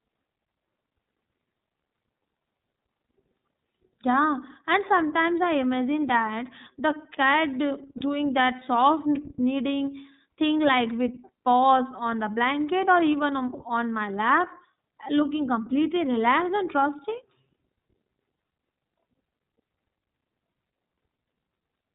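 From start to finish the speech carries the character of the iLBC codec: a narrowband band limit that removes everything above 4 kHz, with a roughness and slightly synthetic edge that is plainly audible. iLBC codes the excitation of each frame independently of the one before. The sound fits its 13.33 kbps mode with 30 ms frames, the trade that keeps it robust to loss at the cost of fine detail in the voice.

At 7.98 s, lasting until about 8.02 s, lost iLBC frames cause a brief dropout just before "that soft". The gap sounds like one missing 30 ms frame. The decoder covers it by repeating the last pitch cycle blended with noise, which comes across as a short held, faintly buzzy vowel. Because the next frame decodes on its own, the voice snaps back almost immediately.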